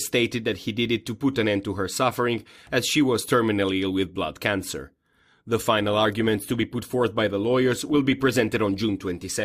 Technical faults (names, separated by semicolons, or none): adaptive stream at a lower bitrate